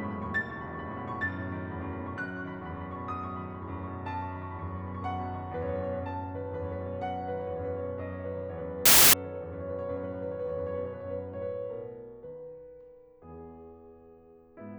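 Packed 24-bit samples read as 32-bit integers cause a wrong sample width fault in this music from 8.86 to 9.13 s, burying it in loud noise at 1.33 times speed with raised pitch.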